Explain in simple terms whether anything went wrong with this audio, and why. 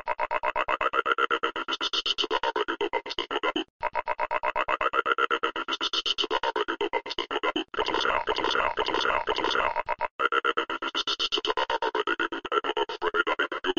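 A piece of the stream likely failed to load and was skipped, a stream segment skipped fault, so at 12.45 s the sound jumps ahead with a small blip.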